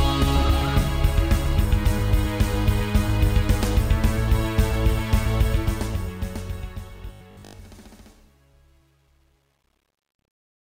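The audio turns robotic between 6.97 and 7.63 s: a rigid, metallic 50 Hz buzz, likely from repeated short buffers, each around 20 ms, covering about half the time. Unlike mains hum, it only roughly tracks the underlying sound.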